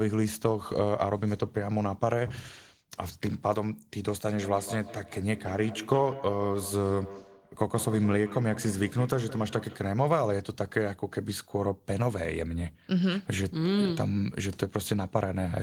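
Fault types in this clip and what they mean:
Feedback echo between two devices: from 4.3 to 9.9 s the speech returns about every 150 ms, peaking at about 14 dB below the speech. A second device nearby plays this microphone's signal back into it, and no echo canceller removes another device's playback.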